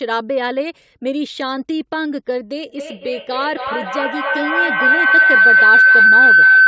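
From 2.69 s to the end, two devices on the call share a room, and their microphone-to-loudspeaker loop gains level on each pass. The result is feedback howl: a tone near 1.5 kHz swells, pulsing roughly every 300 ms, and peaks about 11 dB above the speech.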